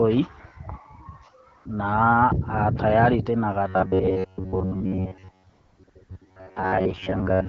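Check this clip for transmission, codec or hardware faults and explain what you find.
Two faults are audible in this speech: AMR comfort noise gaps and a robotic buzz, carried over an AMR-WB link whose light coding leaves the band-limited speech clear.

AMR comfort noise at 1.57–1.65, 5.49–5.79, 5.83–5.87, 5.89–5.95, 6.03–6.09 and 6.17–6.21 s: speech frames stopped, and a smooth synthetic hiss replaces the real background, switching in and out.

Robotic sound from repeated short buffers from 3.68 s to the end: most of the audio there is likely looped short stretches standing in for skipped sound, imposing a rigid metallic 93.8 Hz buzz that fits buffers of about 10.7 ms.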